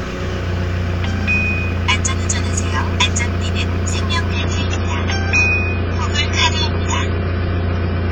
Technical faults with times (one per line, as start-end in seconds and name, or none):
4.33-8.12 adaptive stream at a lower bitrate